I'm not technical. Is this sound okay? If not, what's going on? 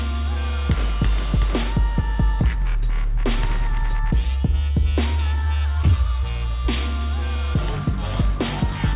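Yes, this sound is okay, and there's nothing wrong going on in it.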